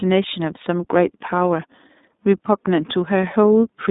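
Throughout, the speech passes through the iLBC codec, coding each 30 ms frame independently and dropping everything above 3.8 kHz, which fits its 13.33 kbps mode. The result is plainly audible damage: a narrow, muffled band of about 200 Hz to 3.7 kHz with a rough, synthetic edge.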